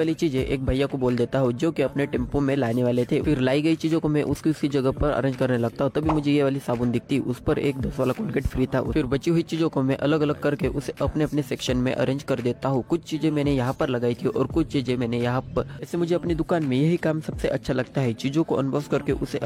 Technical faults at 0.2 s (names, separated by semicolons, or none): none